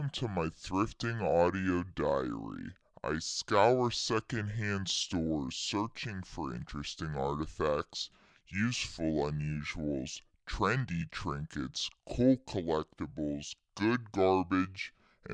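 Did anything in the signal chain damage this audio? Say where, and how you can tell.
Yes, a wrong sample rate at playback: the speech runs slow and low throughout, about 0.69x speed and 6.5 semitones flat, which fits 32 kHz material played at 22 kHz.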